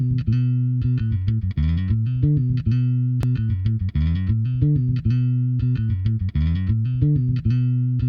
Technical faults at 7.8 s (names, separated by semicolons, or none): none